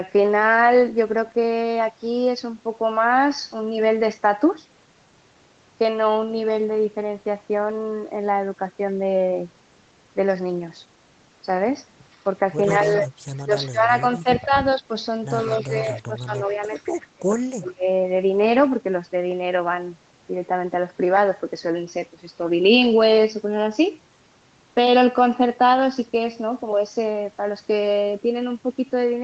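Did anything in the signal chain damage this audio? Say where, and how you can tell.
Yes. From 12.12 to 13.67 s, 15.41 to 16.83 s and briefly at 17.66 to 17.70 s, a faint copy of the speech trails it by 115 ms, about 25 to 30 dB down. This is likely an echo leak in call processing. A loudspeaker echo got past the echo canceller. Unlike room reverberation, it is a single discrete repeat at a fixed delay.

There is also speech suppressed in double talk. Between 12.79 and 14.9 s, and again from 15.45 to 17.87 s, the speech dips in pieces, roughly 15 dB in the first stretch and up to around 35 dB in the second. The dips total about one second and one and a half seconds. They overlap the echo, so the canceller was likely turning down both its own talker and the echo at once. Network dropouts would cut out abruptly with no echo alongside.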